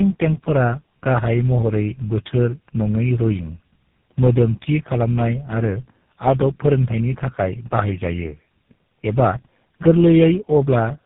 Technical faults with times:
0.00-11.05 tandem speech coding

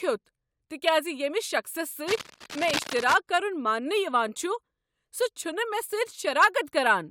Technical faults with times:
2.07-3.18 cable scratch noise

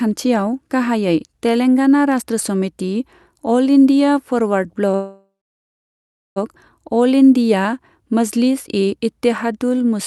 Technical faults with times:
4.95-6.38 call audio freeze

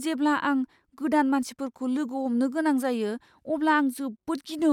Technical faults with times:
none

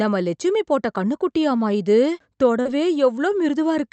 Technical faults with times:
2.61-2.67 short concealed packet loss

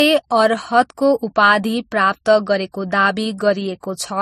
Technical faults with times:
0.00-4.21 transcoding between lossy codecs

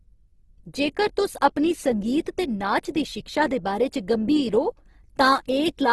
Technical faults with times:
0.00-5.92 Opus compression

